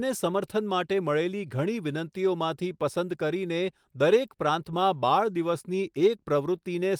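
No technical faults are audible anywhere in the speech recording.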